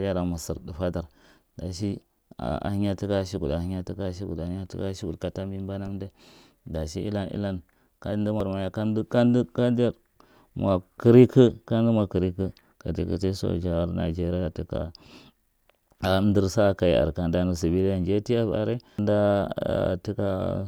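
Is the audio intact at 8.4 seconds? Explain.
No. At 8.40 s, right after "dashi ilan ilan kamda" and before "maya kanda kanda", there is a brief chirp, squawk, click or short hole. This is damaged data in a compressed stream: corrupted bytes make the decoder misread a frame and lose sync until it finds the next valid frame header.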